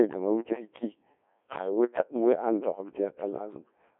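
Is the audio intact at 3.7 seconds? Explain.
No. At 3.7 s, as throughout, the speech passes through a Codec 2 vocoder, consistent with about 1.3 kbit/s, rebuilt from sine waves in a 250 Hz to 3.5 kHz band, sounding heavily robotic and buzzy.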